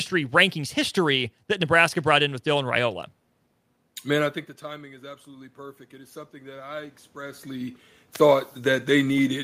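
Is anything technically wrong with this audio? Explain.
Yes. Automatic gain rising, 4.64 to 8.93 s: the input dropped by about 17 dB, roughly when the talker moved near 4 s, so the gain control judged it too quiet and slowly added about 6 dB. Voice and room noise swell together over those four seconds.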